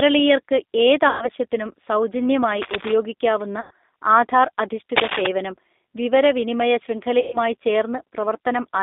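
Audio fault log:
throughout: G.729 codec. The sound is squeezed into a line band of about 250 Hz to 3.7 kHz and rebuilt at 8 kbit/s from a vocal tract filter, pitch predictor and sparse pulses, so it is plainly rough and synthetic. A spectrogram shows nothing above 3.7 kHz and a blurred, grainy harmonic structure.
1.09–1.29 s, 3.61–3.71 s, 7.20–7.38 s: VoIP packet loss concealed by the speech codec. About 120, 100 and 130 ms of audio go missing, which fits runs of ten or more 10 ms frames. The decoder stretches its last pitch and filter into a buzzy, fading tone, and the sound stays weak just afterwards. A spectrogram shows smeared, flat harmonics and a decaying envelope in the waveform.
2.54–2.96 s, 4.96–5.27 s: cable scratch noise. Dense, uneven bursts of scratching sit over the sound, a few dB below the speech in the first and about as loud as it in the second. This is likely a worn cable or connector being moved. 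The waveform shows jagged spiky clusters, and a spectrogram shows broadband vertical streaks.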